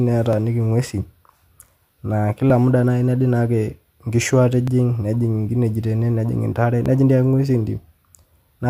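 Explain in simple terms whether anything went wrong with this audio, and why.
Clock drift buffer slips: a click or pop recurs in this speech every 2.17 s, about four times between 0.33 s and 6.86 s. The likely cause is two pieces of equipment keeping time on separate clocks, one running roughly 700 parts per million faster than the other. The holding area between them slowly overfills or runs dry, and each time a chunk of sound, about 70 samples, gets skipped or repeated, producing the steady click.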